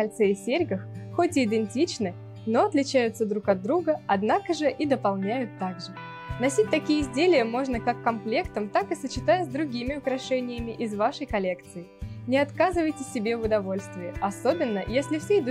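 No technical faults are audible.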